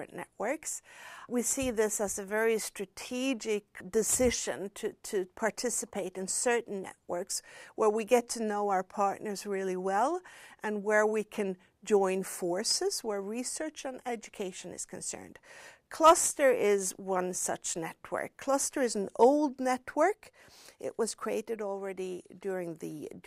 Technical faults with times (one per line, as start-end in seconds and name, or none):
none